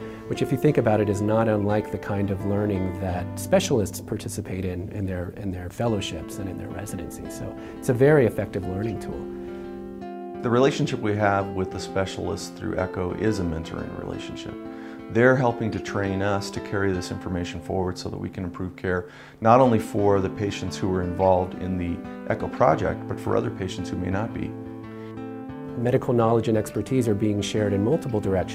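No dropouts, clipping, glitches or other technical faults turn up anywhere in the recording.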